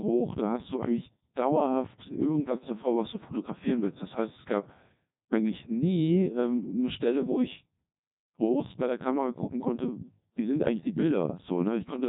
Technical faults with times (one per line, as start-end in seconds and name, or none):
0.00-12.09 Codec 2 vocoder